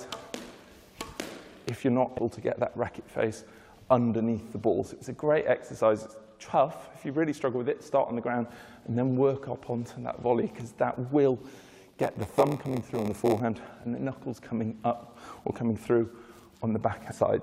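At 2.17 s and again from 17.10 to 17.12 s there's damaged data in the compressed stream: the decoder hits corrupted frames, loses sync and spits out a quick glitch before catching the next header. From 11.53 to 13.40 s a block size mismatch with padding adds a 93.8 Hz buzz and slows the audio to 0.938x at roughly normal pitch, which fits a 512-sample read buffer being fed shorter, zero-filled blocks.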